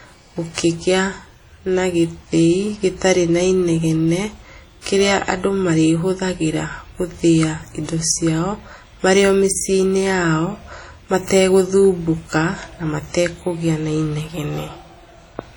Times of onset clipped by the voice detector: none

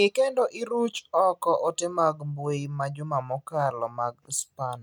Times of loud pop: none

